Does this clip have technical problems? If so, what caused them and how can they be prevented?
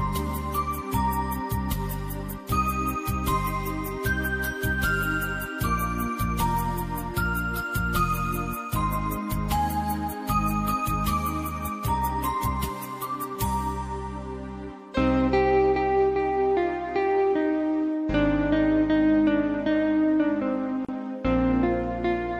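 Yes. A gap at a join of encoded pieces opens in the sound from 20.85 to 20.89 s (36 ms): separately encoded segments were joined with encoder start delay and final-frame padding left in. To prevent it, encode the material in one pass or trim each segment's delay and padding before joining.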